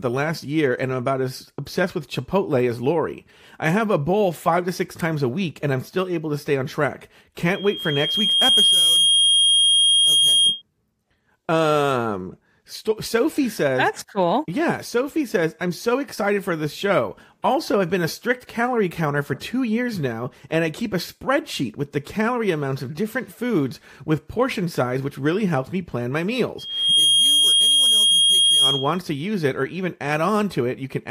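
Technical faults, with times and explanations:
7.54–10.62 s: loudspeaker feedback squeal. Right after "to stay on track", a steady 3.2 kHz tone swells over about a second and settles roughly 5 dB above the speech. The microphone is picking up its own loudspeaker, and at 3.2 kHz the loop gain exceeds one, so that frequency keeps reinforcing itself.
26.58–28.99 s: loudspeaker feedback squeal. The same 3.2 kHz howl returns after "helps me plan my", building in about 0.4 s to about 5 dB above the speech, and stops before "to use it or".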